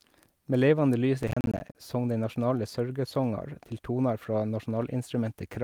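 A speech clip with processor overload crackle from 1.20 to 1.75 s, between "levande lys" and "song dei nasjonale sørgesongar". Around twenty buffers of roughly 10 ms each miss their deadline and drop to silence, making a gritty burst rather than one clean dropout or steady clipping distortion.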